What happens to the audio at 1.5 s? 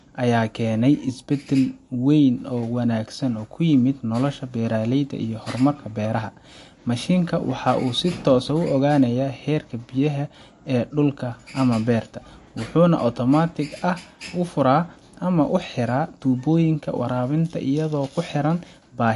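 Likely MP3 compression, running the whole clip, at a rate fitting about 50 kbps: treble is cut above 11.3 kHz, leaving the speech dull and audibly watery.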